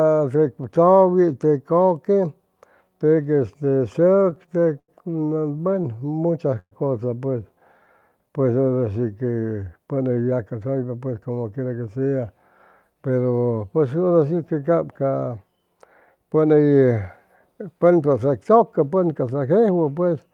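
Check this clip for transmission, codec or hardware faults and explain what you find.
The speech shows network-delivery faults: two bursts of repeated stalls, two short jitter buffer slow-downs and one longer jitter buffer speed-up.

Repeated stalls (stutter) occur from 3.93 to 4.90 s and from 6.23 to 6.73 s. Packets arrived late, the buffer drained, and the receiver stretched the last sound to cover each gap. The first burst has nine gaps totalling 168 ms, the longest 90 ms, so about 17% of that span is filler. The second has four gaps totalling 143 ms, one lasting 123 ms, so about 28% is filler. Nothing is lost, but the speech catches and drags. On a spectrogram the harmonics freeze into flat, smeared bands at each gap. In the waveform the longer fills taper in amplitude.

The jitter buffer slow-down runs from 5.81 to 6.56 s, adding 60 ms at 93% speed, and from 7.80 to 8.10 s, adding 42 ms at 88%. 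With its reserve low, the receiver repeated single pitch periods many times over to build up buffered audio. The speech sounds drawn out at unchanged pitch. The waveform shows near-identical cycles repeating back to back. On the spectrogram the harmonics stay level but look stretched along the time axis.

The jitter buffer speed-up spans 9.93 to 11.97 s at 111% speed and removes about a fifth of a second. Too much audio had queued, so the receiver trimmed out short runs of one or a few pitch periods to cut the delay. The speech sounds hurried without any rise in pitch. The spectrogram shows harmonics at normal spacing, but syllables are compressed in time.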